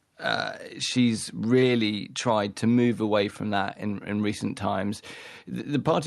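No technical faults can be heard in this speech recording. It has passed through a working WebRTC call path, which shows only as the light coding texture of the Opus codec and a top end that stops around 12 kHz.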